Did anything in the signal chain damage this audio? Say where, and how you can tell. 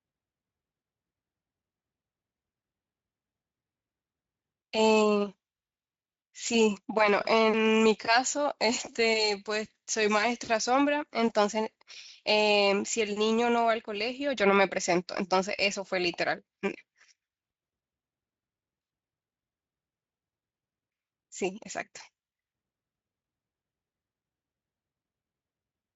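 No, nothing in the signal chain stood out as damaging this speech on listening.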